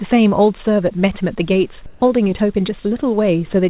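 From 1.86 to 2.02 s, a 160 ms pause has its real background swapped for comfort noise: a steady, featureless hiss at the same level, the texture gone. Likely the sender's discontinuous transmission went quiet and the receiver synthesised filler, all within the call's 4 kHz band.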